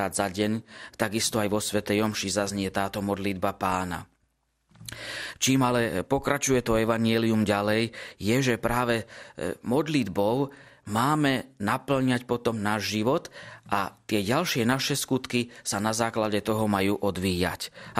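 From start to finish the speech sounds dull and muffled, with a gurgling, granular roughness as upper frequency bands drop in and out. This is plainly audible and likely MP2 compression, with bits so scarce, fitting roughly 80 kbps, that high sub-bands are switched off and the rest are coarsely quantised.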